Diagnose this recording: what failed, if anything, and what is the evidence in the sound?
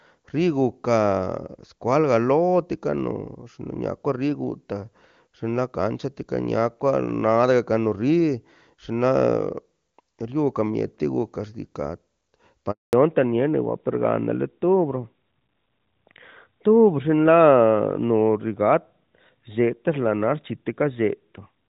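At the network stage, the call suffered a handover gap: while it was passed from one network to another, no speech frames arrived for about 220 ms. The speech fades out within a few tens of milliseconds at 12.71 s and stays silent until 12.93 s, when the new link starts delivering audio. Whatever was said during that window is gone; it is simply not in the stream.

At the codec stage, the call fell back to narrowband right after the handover. Before 12.93 s the speech is full and clear, consistent with AMR-WB (HD Voice) at a high rate such as 23.85 kbit/s. From 12.93 s to the end there is nothing above 4 kHz, so the speech turns duller and rougher. That fits a switch to AMR-NB at around 12.2 kbit/s.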